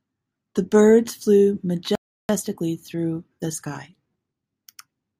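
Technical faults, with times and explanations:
1.95–2.29 s, playback stall: after "birds flew" the speech cuts to silence for about 340 ms, likely the player starving for data or blocked.
2.29–4.53 s, time-compressed catch-up: speech sounds hurried, about 1.15 times normal speed at unchanged pitch, as small pieces are cut and cross-faded to clear the backlog.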